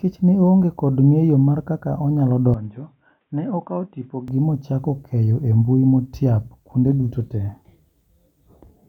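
From 2.54 s, after "ngeyo mar kaka onyalo", the speech abruptly turns dull and boxy, losing everything above 3.8 kHz, dropping roughly 10 dB and gaining faint new background noise, with no gap. Likely an input switched to a poorer device; it reverts at 4.28 s, before "mochako keyo embui motiap".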